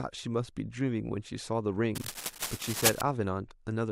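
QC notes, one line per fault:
1.95–3.01 s, cable scratch noise: dense, uneven crackling and rustling sits over the speech at roughly its own level, likely from a worn cable or connector being moved so its contact resistance jumps rapidly; the spectrogram shows ragged broadband vertical streaks, the waveform spiky, irregular bursts.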